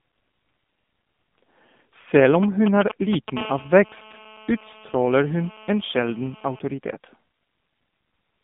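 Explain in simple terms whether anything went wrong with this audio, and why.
AMR narrowband mobile codec, throughout: the voice went through a 2G/3G phone link that keeps only about 150 Hz to 3.6 kHz and discards everything above roughly 3.7 kHz. It rebuilds speech from a compact model of the voice, so it sounds muffled, boxy and noticeably synthetic.

GSM signalling bursts, 2.34 to 3.38 s: a nearby mobile phone briefly contacted the network, sending short groups of radio pulses. The audio circuitry picked these up and turned them into sound, a loud galloping dit-dit-dit of short buzzes over the speech.

GSM phone buzz, 3.38 to 6.59 s: the same phone then settled into a call, transmitting in bursts 217 times a second. The electronics converted that steady radio pulsing into a continuous hard, raspy 217 Hz buzz, quieter than the speech.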